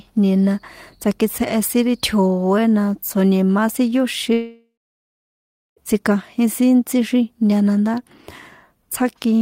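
At 4.33 s the speech breaks off into a brief buzzy continuation of the last sound that fades within a few tenths of a second, leaving about 1.1 s of silence before the audio resumes at 5.80 s with roughly 1.4 s of material gone. This is a long network dropout, likely a gap in arriving packets that the receiver could only paper over briefly. On a spectrogram, smeared repeating harmonics thin into a blank band; the waveform shows a decaying envelope, then a flat line.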